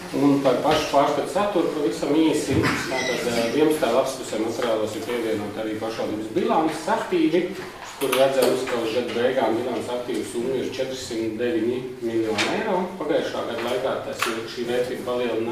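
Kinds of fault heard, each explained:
No kinds of fault are heard in this audio.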